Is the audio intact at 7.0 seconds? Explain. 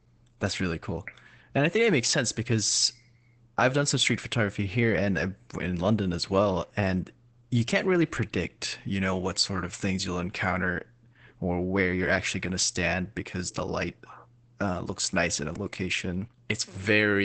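No. At 7.0 s, as throughout, the speech sounds muffled, hoarse and slightly robotic, with nothing above 8.6 kHz. This is Opus voice compression: the SILK coder's wideband limit and coarse excitation coding fit a bitrate around 12 kbps.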